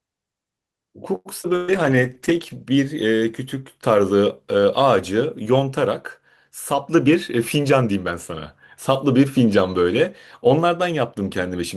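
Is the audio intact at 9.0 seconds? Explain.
Yes, the speech at 9.0 seconds plays through intact, with no dropout, click, distortion or other fault at that moment.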